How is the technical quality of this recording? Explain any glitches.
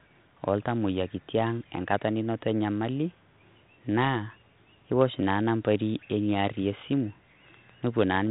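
There are no glitches: the speech arrives through a G.726 ADPCM path at 32 kbit/s, which stops everything above 3.9 kHz and leaves only light coding damage from the adaptive difference quantiser, with no further problem anywhere in the recording.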